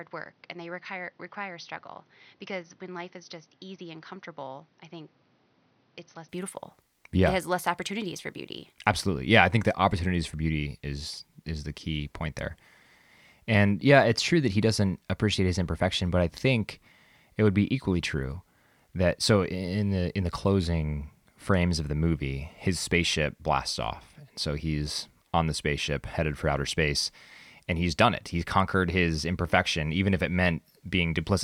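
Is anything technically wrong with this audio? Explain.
Yes. Input switched to a poorer device, 0 to 6.29 s: likely a lesser microphone, so the opening speech sounds dull, with nothing above 6.1 kHz, and about 10 dB quieter before clearing abruptly.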